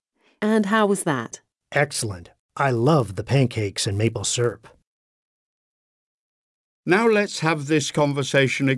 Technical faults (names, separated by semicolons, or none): resampler restarted on every block